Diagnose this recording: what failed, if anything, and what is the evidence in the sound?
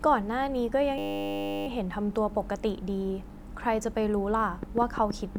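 From 0.98 to 1.67 s there's a classic system hang loop. The driver or buffer stage stalled while the hardware kept replaying the same 10 ms chunk, which fits a 10 ms ring buffer, around 70 times. Because the loop is so short it comes across as a steady 100 Hz buzz, not a stutter. When the system recovers, the speech picks up with little or nothing obviously missing.

From 4.63 s to the end there's a train of clicks, roughly 7.8 per second at an uneven pace. The pulses all have much the same shape and sit about 10 dB above the speech, so they tick through the gaps as well as over the talking. The likely cause is interference getting into the analogue wiring from nearby equipment, or a faulty connection or power supply.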